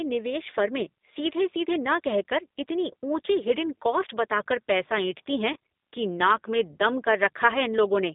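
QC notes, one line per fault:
Throughout: G.729 codec. The audio is confined to roughly 200 Hz to 3.7 kHz, and nothing above that survives. The damage is plainly audible, with a rough, synthetic edge. That edge comes from rebuilding the speech from a filter, a pitch predictor and a few pulses per frame, which fits an 8 kbit/s G.729A stream.
5.53 to 5.56 s: VoIP packet loss concealed by the speech codec. Right after "कर पैसा ऐंठती हैं", about 30 ms drops out, which fits a single lost packet. The decoder stretches its last pitch and filter into a brief fill that fades, and the speech resumes with "कि नाक में दम" but stays weak or distorted for a moment after.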